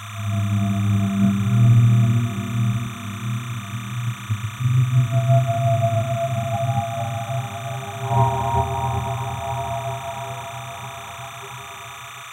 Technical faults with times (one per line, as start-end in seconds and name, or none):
0.00-12.33 timecode bleed